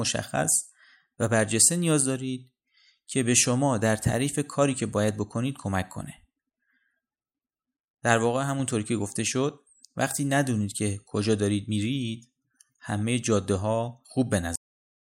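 At 14.56 s there's a cut-off end: the final buffers never got written, so the speech stops mid-sound and drops straight to digital silence with no decay.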